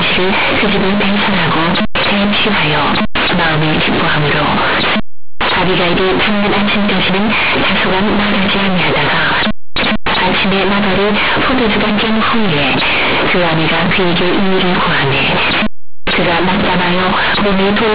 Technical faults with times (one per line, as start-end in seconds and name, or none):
0.00-17.95 companded audio read as linear